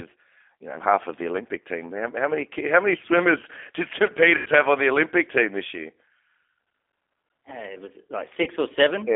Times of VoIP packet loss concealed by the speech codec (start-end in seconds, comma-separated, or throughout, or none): 4.37-4.49, 8.43-8.49